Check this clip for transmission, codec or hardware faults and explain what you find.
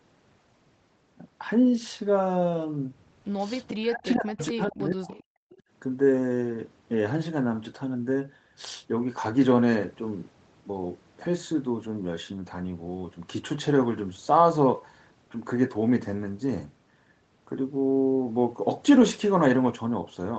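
Three kinds of echo-canceller trouble appear, all within about two seconds, while the speech itself is carried over a call path that stops at 8 kHz.

Echo leak: brief, quieter copies of the speech surface at 3.67–3.73, 4.38–4.42, 5.1–5.23 and 5.5–5.62 s, each trailing the original by 437 ms. The first two sit roughly 15 dB below the speech, the later ones fainter, around 25 and 30 dB down. The likely cause is a loudspeaker on the far end whose canceller failed to strip out everything its microphone caught, so fragments were returned down the line.

Speech suppressed in double talk: from 3.73 to 5.11 s the speech sags and breaks up in pieces, falling by as much as roughly 40 dB and losing about a second in total. This fits both sides talking at once, with the canceller unable to tell its local talker from the loudspeaker's echo and attenuating the whole mix.

Background gated by the echo canceller: at 5.39–5.5 s the room tone drops away by about 33 dB for roughly a tenth of a second, then returns. 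The canceller clamped the microphone hard while the loudspeaker was active and released it once playback eased, so the ambience briefly vanishes and snaps back.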